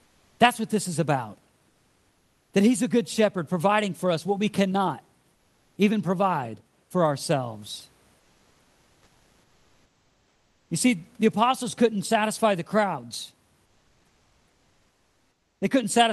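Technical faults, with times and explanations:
5.35–5.75 s, 8.19–10.69 s and 13.65–15.61 s: comfort noise in place of the background. In each pause the real room noise gives way to a smoother, synthetic noise. It sits about 2 dB lower than the background around it. That background is already quiet, about 43 to 46 dB below the loudest speech. The likely cause is discontinuous transmission in the Opus call codec. The sender stops during silence, and the receiver fills the gap with generated noise.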